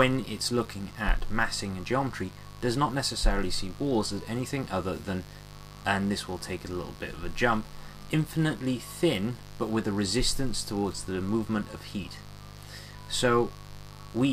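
A steady, raspy buzz sits under the sound from start to finish, at about 20 dB below the signal. This is mains buzz at 50 Hz. Sharp switching spikes, from a dimmer, a rectifier or an unshielded line, enter the audio twice per mains cycle, and they carry a dense stack of 50 Hz harmonics extending up into several kHz. That high harmonic content gives the hum its rasp.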